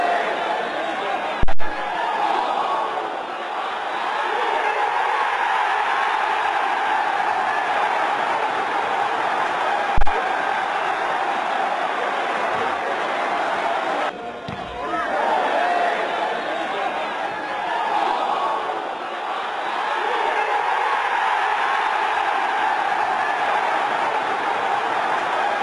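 A supply step on the live input, passing through the coupling capacitors, causes a phantom power thump at 1.43 to 1.77 s and again at 9.98 to 10.09 s: a deep low-frequency thump peaking around -6 dBFS, dying away over about 77 ms and 26 ms respectively.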